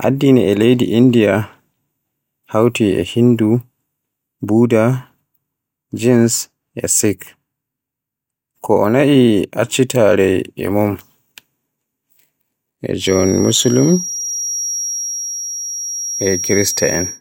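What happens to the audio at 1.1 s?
Nothing goes wrong at 1.1 s; the speech carries on intact through that moment, with no dropout, click or distortion.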